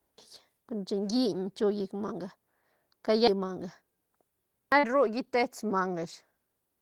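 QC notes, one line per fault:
4.79–4.86 s, short concealed packet loss: about 40 ms of speech never reached the decoder in time, and the receiver filled the gap by extending the preceding sound for roughly 38 ms before blending back into real audio, leaving a brief smear or wobble.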